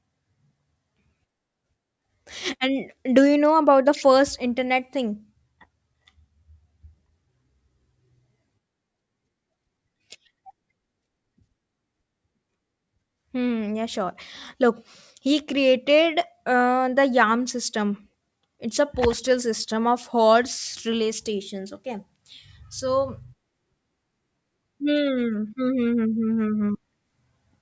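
From start to finish the speech carries aliasing: its sibilants and fricatives sound gritty and metallic, with hiss landing at pitches unrelated to the voice. The audio appears to have been taken down to a lower rate without a proper anti-alias filter, which fits a drop from 48 kHz to 16 kHz. Energy above 8 kHz folds back below it at roughly 25 dB under the speech. A spectrogram shows content running hard up to an 8 kHz ceiling, with mirrored, misplaced bands beneath it.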